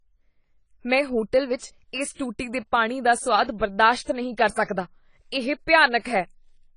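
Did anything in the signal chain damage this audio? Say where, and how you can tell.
Yes, at the codec stage, across the whole speech clip: the sound is dull and smeared, with nothing above 10 kHz and a warbling, fizzy texture on sibilants and held vowels. This is likely AAC compression, with a starved encoder lowering its cut-off and leaving holes in the spectrum, which fits AAC-LC at around 24 kbps. A plain low-pass filter would also remove the top end, but it wouldn't leave this swirling, noisy texture below the cut-off.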